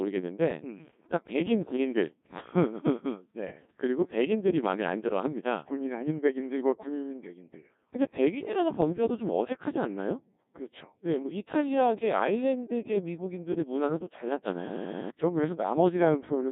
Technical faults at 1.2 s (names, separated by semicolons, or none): Codec 2 vocoder; bit errors on digital voice radio